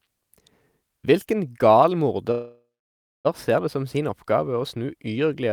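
At 2.31 s the speech halts in a call audio freeze until 3.27 s. The last sound smears into a fading buzz or hiss, then 0.6 s of silence. Packets were likely held up, emptying the jitter buffer. Speech resumes where it stopped, nothing missing, but 0.93 s late.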